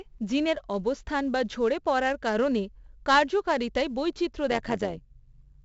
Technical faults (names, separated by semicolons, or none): 4-bit ADPCM compression; overlap-add ripple